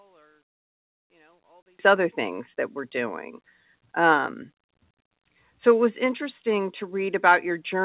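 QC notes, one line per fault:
0.00–1.79 s, one channel inverted: For the first 1.79 s the speech nearly disappears, dropping about 38 dB, leaving only a faint residue of whatever differs between the two sides. The likely cause is reversed polarity on one stereo channel, so the centred voice, identical in both channels, cancels when they are summed to mono. Above 4 kHz there is nothing to hear, as expected from the G.711 call path, so the residue is band-limited too.
4.26 s and 6.06 s, microphone volume stepped down: The level of speech and background falls abruptly at two points, by about 1 dB at 4.26 s and by about 2 dB at 6.06 s, each drop completing within roughly 10 ms and then holding at the new level. This is likely automatic gain control in the call software lowering the microphone input volume in single steps, which is why the change is a sudden shift rather than a gradual fade.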